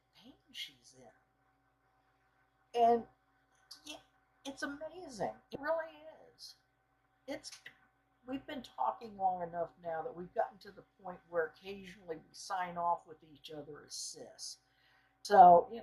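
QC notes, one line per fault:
5.55 s and 15.25 to 15.28 s: damaged data in a compressed stream. Each is a brief chirp or blip. Corrupted bytes made the decoder misread frames and lose sync. It then skipped forward to the next valid frame header.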